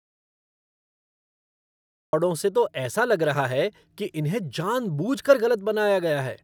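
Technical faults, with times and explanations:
0.00–2.13 s, audio dropout to silence: the speech is already cut when the clip opens, and it's dead silence with no room tone at all until it comes back mid-flow on "से तो ऐसा लग". Likely the input dropped and silence kept being written.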